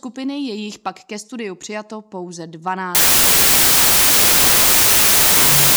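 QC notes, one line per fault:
2.95–5.77 s, wrong sample width: the sound turns into loud hiss with the original buried beneath it, slowed to half speed and an octave lower. This points to 32-bit samples read as 16-bit. Each sample splits into two values, and the low halves become noise.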